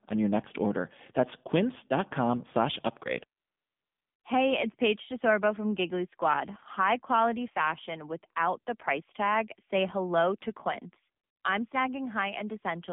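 Across the whole recording the speech carries AMR narrowband mobile codec damage. The band runs only from about 150 Hz to 3.6 kHz, and the voice has the buzzy, synthetic edge of a low-rate mode, which fits AMR-NB at 7.4 kbps. The codec rebuilds speech from a vocal-tract model fed by a few pulses per subframe, so it sounds hollow and artificial. A plain band-limiting filter would keep the voice natural and free of that buzz.

From 3.40 to 4.24 s, right after "slash upgrade", AMR comfort noise replaces the real background. The phone judged the talker silent and stopped sending speech frames for 840 ms, so the receiver generated smooth, steady noise from a rough level and spectrum estimate. It switches in and out abruptly, which sets it apart from a dropout's dead silence. A shorter 200 ms patch of the same noise appears from 11.24 to 11.44 s.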